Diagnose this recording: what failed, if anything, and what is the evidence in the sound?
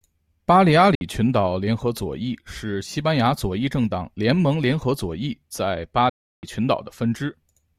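Silent holes at 0.95 s (58 ms, after "巴利阿") and 6.09 s (0.34 s, after "左翼在巴"), with the speech resuming as if it had kept playing. That's likely a Bluetooth dropout, with packets lost on the wireless playback link.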